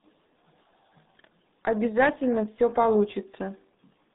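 From start to finish the speech carries RealAudio 14.4 codec damage, and it is heavy. The band is confined to roughly 150 Hz to 3.7 kHz, with nothing above 3.8 kHz, so sibilants and consonant edges are gone and the sound is muffled. The low-rate coder rebuilds the signal coarsely frame by frame, which gives the gargly, smeared texture. That points to an 8 kbit/s stream of the RealAudio 1 type, built for dial-up modems.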